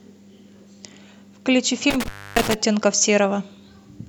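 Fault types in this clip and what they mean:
Intermittent contact: a loose connection briefly opening, so the speech cuts out for about 280 ms with crackle at the edges; waveform shows a near-flat gap bracketed by spikes.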